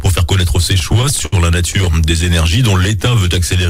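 Between 0.79 and 1.34 s, packets kept arriving late, so the jitter buffer repeatedly ran dry and the receiver stretched the last sound to cover eight brief stalls, the longest 67 ms, about 130 ms in all. This repeated stalling (stutter) returns from 1.70 to 1.95 s with five shorter holds of at most 13 ms. Nothing is lost, but the audio drags and catches.

From 2.78 to 3.67 s, a jitter buffer slow-down rebuilds its reserve by repeating single pitch periods, adding 114 ms. The sound runs at 88% speed with its pitch unchanged, so it comes across as drawn out and sluggish.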